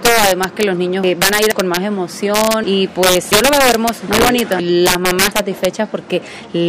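Throughout the clip, integer overflow affects the loudest moments. The signal was driven roughly 9 dB past full scale, and instead of being held at the limit, each sample that exceeded it wrapped around to the opposite extreme of the range. Only a small share of samples, around one or two percent, crosses that line, but every one produces a full-range jump. The result is harsh, violent cracks on peaks, far sharper than ordinary clipping.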